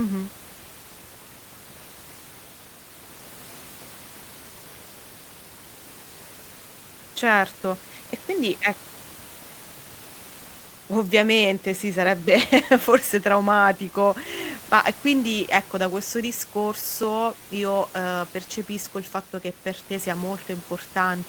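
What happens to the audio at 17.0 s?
At 17.03 s the speech jumps forward by a tiny slice, a millisecond or two, with no silent gap. The likely cause is a dropped buffer (overrun): those samples were overwritten before being read, so the audio on either side is butted together.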